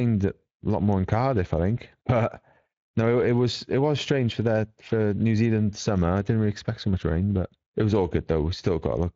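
From start to finish the speech carries plainly audible Speex codec damage, a hoarse, grainy roughness typical of this CELP coder, whose excitation signal has too few bits. The sound points to a setting near 20 kbps. On a spectrogram, harmonics look blurred and speckled.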